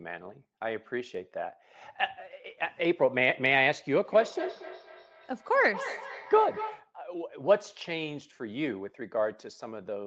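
Feedback echo between two devices runs from 4.05 to 6.92 s. Two devices on the same call share one room: one plays back what the other's microphone sent, and that microphone captures it again. Each device's echo canceller removes only its own playback, so this loop slips through. The speech returns at a steady interval of about a fifth of a second, thinner and more ringing on each pass, reaching about 10 dB below the direct speech at its loudest.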